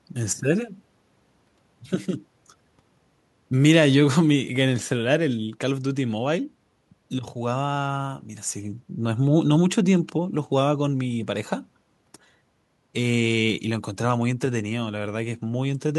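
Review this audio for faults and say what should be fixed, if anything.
Nothing here needs fixing; the speech comes across without any audible technical faults, so there's nothing to correct or prevent.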